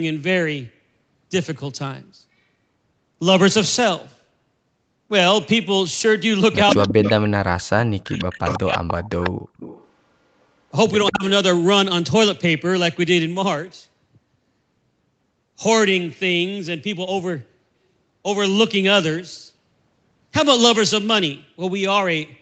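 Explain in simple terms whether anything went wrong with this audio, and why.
Two problems show up, both typical of a call where one side uses a loudspeaker.

Echo leak: from 6.67 to 7.29 s and again from 8.19 to 9.89 s, a second copy of the speech trails the original by about 0.15 s. This is likely the far side's echo canceller letting loudspeaker sound back into its microphone.

Speech suppressed in double talk: from 6.76 to 7.05 s, 7.49 to 9.11 s and briefly at 11.1 to 11.24 s, the speech dips or cuts out in pieces. This likely happens because both sides were talking at once, and the echo canceller turned both its own talker and the echo down.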